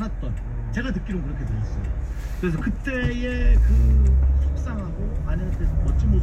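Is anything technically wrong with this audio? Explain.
No technical faults are audible.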